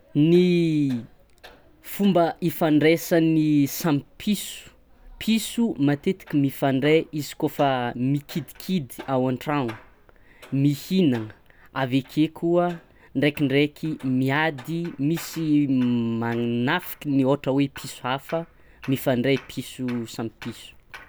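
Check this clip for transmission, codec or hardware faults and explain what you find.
Nothing in the speech signal points to a transmission, codec or hardware problem; level, continuity and bandwidth stay steady and consistent throughout.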